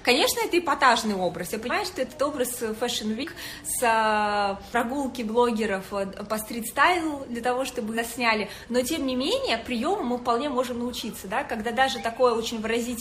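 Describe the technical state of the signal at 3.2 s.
At about 3.22 to 3.24 s the audio jumps forward, as if a tenth of a second or so had been cut out. This is compressed frames skipped: a handful of consecutive frames never reached playback, either missing from the file or rejected by the decoder as corrupt. The sound picks up roughly a tenth of a second later.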